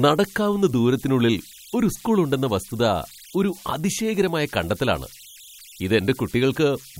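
A whistle around 3 kHz, about 25 dB below the speech, runs throughout: converter idle tones, an undithered delta-sigma stage locking into repeating bit patterns.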